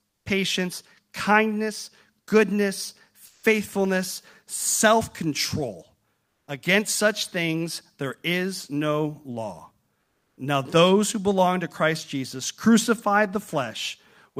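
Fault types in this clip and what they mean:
Sound dropped by the voice detector: Just after "patience kindness goodness", at 3.25 s, about 180 ms of audio gives way to flat, steady noise, and roughly 100 ms of real speech is lost before the signal returns at 3.43 s. The likely cause is the sender's voice detector, running Opus discontinuous transmission, misjudging quiet trailing speech as background, halting transmission, and leaving the receiver to fill the gap with synthetic noise until the detector triggered again.
Comfort noise in place of the background: In two pauses, 6.25 to 6.47 s (220 ms) and 10.01 to 10.37 s (360 ms), the faint background, sitting about 55 to 57 dB below the loudest passages, turns smooth and featureless and shifts in level by about 3 dB. This likely comes from Opus discontinuous transmission: with no speech detected, the sender stops sending, and the receiver substitutes generated noise shaped roughly like the real background, which loses its natural detail.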